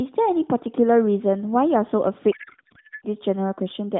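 A codec payload misread runs from 2.32 to 3.06 s. The narrowband AMR frames are packed octet-aligned but unpacked as bandwidth-efficient, so every field lands in the wrong bits, and the speech collapses into garbled, warbling noise that barely tracks it.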